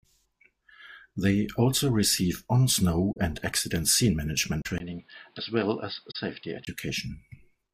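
A speech recording with two separate problems. First, corrupt frame concealed at 3.12 to 3.17 s, 4.62 to 4.67 s and 6.10 to 6.16 s. Each is a soft little hole or smear, about 50 ms long, rather than a click, which fits two or three damaged AAC frames that the decoder caught and papered over by muting or reusing a scrambled version of the previous spectrum. The timing stays intact. Second, from 4.78 to 6.67 s the sound goes dull and boxy. Nothing comes through above 5 kHz, there's a 20 ms gap right at the changeover, the level drops a few dB, and a fresh noise floor sits roughly 35 dB under the speech. That's most likely an input switched to a poorer device, such as a headset in call mode, before it flips back.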